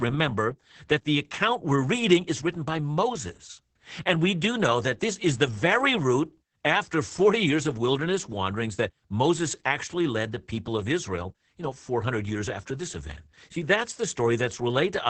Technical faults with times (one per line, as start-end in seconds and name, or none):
0.00-15.10 Opus voice compression